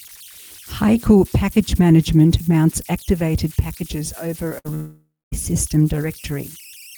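Speech, with a whistle running under the whole recording and a cluster of transmission faults between 4.49 and 5.34 s. The whistle is converter idle tones: a delta-sigma converter without dither settles into repeating bit patterns when its input is small, and those patterns produce a tone, here at around 3 kHz and about 24 dB below the signal. It is most audible in pauses as a thin steady pitch and turns into grainy noise under quieter passages.

At 4.49 to 4.53 s there is a short concealed packet loss. About 20 ms of audio never reached the decoder in time, and the receiver covered roughly 12 ms of it by continuing the preceding sound before blending back into real audio. The result is a brief smear or wobble rather than a clean gap.

Shortly after, at 4.59 to 4.67 s, comes a burst of packet loss, about 60 ms missing in a row. Concealment extends the last sound across most of that gap, about 59 ms, while turning it down. 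A voiced sound becomes a short held buzz and anything else a fading hiss. The audio then resumes slightly further on, with the intervening material gone.

The largest fault runs from 4.75 to 5.34 s and sounds like a long network dropout, which is the likely cause. About 580 ms of audio is missing. The receiver first continues the last sound as a fading buzz or hiss, and the final stretch, about 240 ms, is silence. Speech then returns further on without the lost portion.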